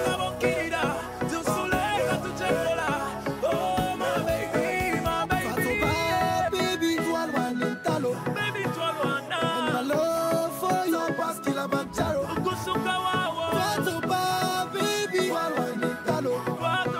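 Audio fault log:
There is no fault to log.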